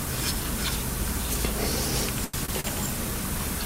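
At 2.24 to 2.35 s, 2.45 to 2.50 s and 2.60 to 2.66 s there's a cluster of short stalls from a late packet. The jitter buffer ran dry, so the last bit of sound got stretched for 91, 28 and 39 ms. Nothing drops out, but it hangs with a faint buzzy wobble.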